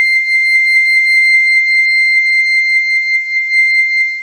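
From 1.27 s to the end, the music drops to a lower-bitrate adaptive stream. The treble vanishes above 9 kHz and codec artefacts rise, with no gap.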